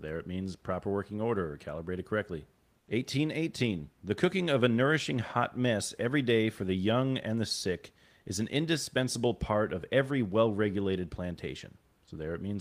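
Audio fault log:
2.79–2.87 s, comfort noise in place of the background: just after "order or calibrated correctly", the room noise is swapped for about 80 ms of smooth, even hiss roughly 5 dB quieter, so the room's texture briefly goes flat before the real background returns. The likely cause is discontinuous transmission, where the sender pauses and the receiver synthesises noise. A spectrogram shows a short, uniform, slightly dimmer band, and the waveform shows a small dip in the noise floor.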